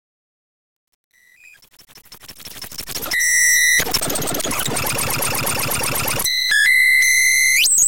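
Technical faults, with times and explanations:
0.00–3.43 s, truncation distortion on a fade: the fade-in rises with a gritty, buzzing edge, worst from 0.00 to 2.72 s. The gain stage kept too few bits and added no dither, which fits roughly 9-bit resolution, so quiet passages collapse into coarse square steps. Unlike a noise gate's clean cut-offs, the grit tracks the level and eases as the fade reaches full level at 3.43 s.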